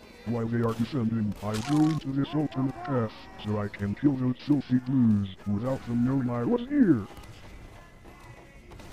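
Listening closely from beginning to end, nothing stood out as a technical problem anywhere in the recording.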